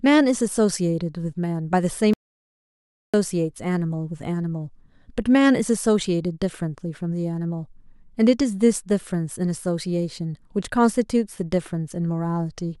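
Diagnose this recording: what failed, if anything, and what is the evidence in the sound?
There's an audio dropout to silence from 2.14 to 3.14 s: the speech cuts off mid-flow and returns a second later, with silence in between and no room tone. That points to the input side, likely a device or link dropping out while the recorder kept writing.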